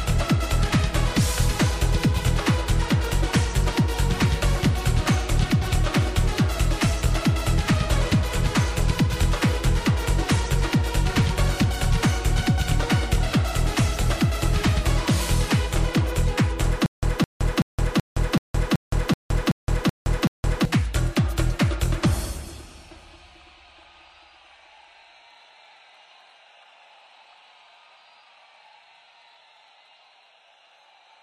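From 16.86 s to 20.65 s the audio falls into a stutter with silent gaps. A fragment of about 0.21 s plays, drops to about 0.17 s of dead digital silence, then plays again, ten times at a steady 0.38 s period. The likely cause is a stalled player or stream replaying its last buffer at each retry. On a waveform this shows as identical blocks separated by flat lines, and on a spectrogram as repeated stripes with empty columns between.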